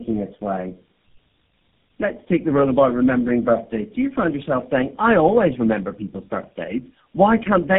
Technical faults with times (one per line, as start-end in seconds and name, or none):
0.00-7.79 tandem speech coding